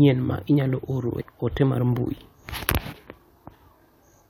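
A speech clip with one case of compressed frames skipped, around 1.20 to 1.22 s, between "ma inyalo" and "ote mar mbui". The audio jumps ahead roughly a tenth of a second, which fits about five 23.2 ms frames going missing.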